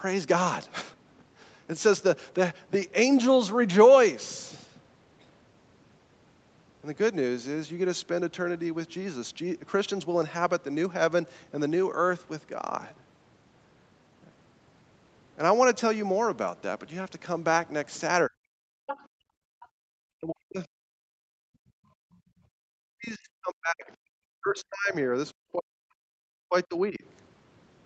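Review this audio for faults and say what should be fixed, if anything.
Speech suppressed in double talk shows up three times: 18.27 to 18.65 s, 20.18 to 21.42 s, and a long stretch from 22.68 to 27.03 s where roughly three seconds are affected. The talker drops by around 40 dB. This is likely the echo canceller losing track of who's talking when both ends speak at once, so it ducks everything to be safe. A canceller tuned for better double-talk detection, or a headset on the talker's end, would fix it.

The other side's voice leaking through appears twice, as short scraps at 18.87 to 19.04 s and 19.61 to 19.68 s. The first sits roughly 10 dB under the talker. The second is much fainter, around 30 dB down. It's likely loudspeaker playback reaching the mic that the canceller didn't fully remove, so bits of the far end bleed back. Better echo-path convergence or lower speaker volume would prevent it.

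Background gated by the echo canceller happens at 19.07 to 19.9 s and 21.7 to 22.4 s. The room tone dips by about 37 dB and then about 35 dB, each time for roughly 0.7 s, then comes back. The canceller is slamming the mic down hard while the speaker plays and releasing afterwards. Gentler suppression, or comfort noise to fill those gaps, would keep the background steady.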